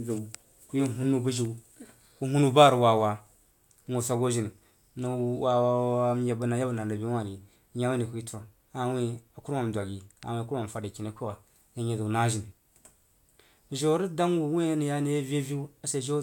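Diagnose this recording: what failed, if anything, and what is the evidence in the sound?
Nothing in the recording points to a failure at any stage of the chain. No dropouts, clicks, distortion or timing faults can be heard anywhere in the speech.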